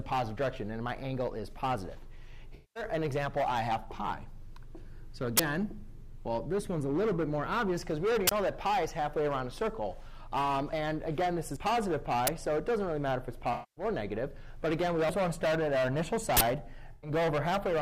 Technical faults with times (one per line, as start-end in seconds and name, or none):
2.55-2.83 AAC frame loss with concealment
5.37-5.39 uninitialised buffer
8.27-8.31 uninitialised buffer
10.73 dropped buffer (overrun)
11.56 dropped buffer (overrun)
12.27 uninitialised buffer
13.53-13.84 AAC frame loss with concealment
15.09 dropped buffer (overrun)
16.37-16.41 uninitialised buffer
16.93-17.11 AAC frame loss with concealment